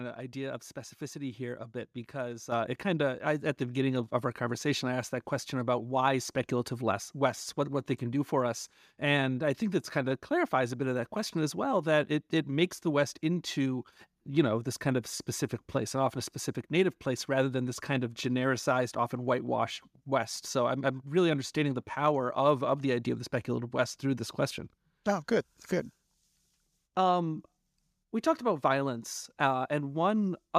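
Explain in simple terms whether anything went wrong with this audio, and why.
At about 2.52 seconds, right after "here a bit because" and just before "it kind of", the speech suddenly gets noticeably louder, and the background rises right along with it, all in one instant jump. This is a microphone volume stepped up fault: the calling software judged the microphone too quiet and turned up its input level in a single step, mid-sentence, instead of easing it up gradually.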